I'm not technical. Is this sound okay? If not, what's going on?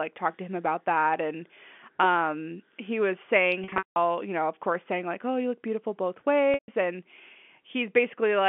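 No. Pieces of the audio went missing in transmission, a fault called packet loss with pitch repetition. From 3.64 to 3.96 s, between "um he was saying" and "you know of course", about a quarter second was lost in scattered gaps, the longest 180 ms. The receiver filled them by repeating the last bit of voice, so it sounds briefly held and buzzy, then fades. At 6.54 s, after "you look beautiful both", another 140 ms drops out the same way. The narrow phone-line sound is normal.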